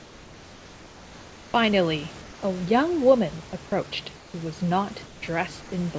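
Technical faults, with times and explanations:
0.00–1.54 s, 4.16–4.34 s, 5.06–5.22 s and 5.62–5.72 s, comfort noise in place of the background: pauses turn steady, featureless and about 3 to 4 dB quieter, likely discontinuous transmission. On a spectrogram the room's texture gives way to smooth, even noise bands.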